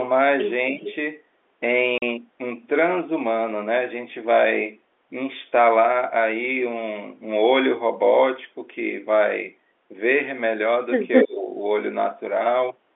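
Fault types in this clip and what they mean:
Speech suppressed in double talk: at 0.73–0.86 s and 11.24–11.48 s the speech dips by about 10 dB, then about 20 dB, likely because the echo canceller ducked both overlapping sides.
Echo leak: at 0.88–0.93 s and 11.13–11.25 s a delayed copy of the speech returns 293 ms and 218 ms late, likely loudspeaker pickup the canceller missed. The second copy is about 10 dB louder than the speech.
Packet loss filled with silence: at 1.98–2.02 s a hard-edged 40 ms hole cuts the speech, which fits two lost 20 ms packets replaced with silence.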